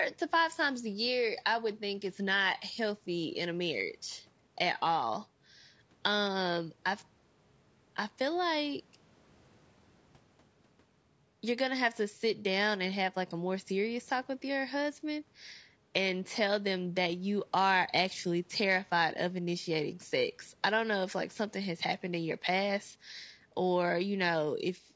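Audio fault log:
throughout, low-delay AAC compression: speech is plainly rough and grainy, with noise between harmonics, likely from short-frame AAC-ELD coding at a rate fitting about 32 kbps.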